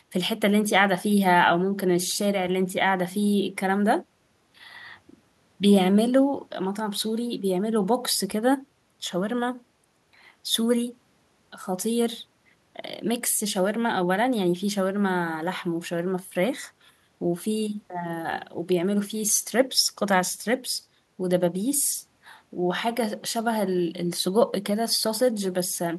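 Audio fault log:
Nothing to log here; the speech runs along without any technical trouble worth noting.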